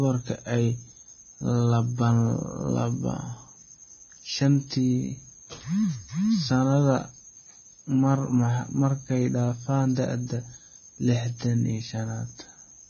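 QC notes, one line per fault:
Throughout Vorbis compression: nothing above 6.5 kHz, grainy treble and smeared attacks, likely a low-bitrate encode near 16 kbps; noise replaces detail rather than sitting over it.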